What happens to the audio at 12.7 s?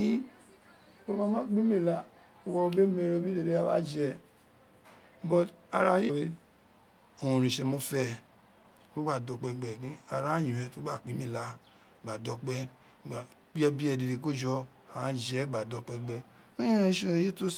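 Nothing goes wrong at 12.7 s; the speech carries on intact through that moment.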